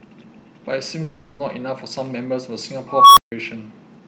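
From 1.03 to 1.42 s the speech stops and is replaced by a continuation of the last sound, a buzzy, hissy carry-over lasting about 360 ms that fades as it goes, with no stretch of true silence. When the speech returns, it picks up further along, with roughly 360 ms of material simply gone. This is most likely a long network dropout: packets stopped arriving, the receiver concealed the gap by extending what it last had, and the lost audio was never recovered.

At 2.87 s a tone around 1 kHz appears and swells rapidly over about 0.29 s until it is extremely loud and clipped. The sound then cuts out completely for about 0.15 s, ending at 3.32 s. This is an unstable filter. A recursive filter with bad coefficients fed its own output back with too much gain, so the tone grew without limit until the values overflowed and the output went silent while the filter reset.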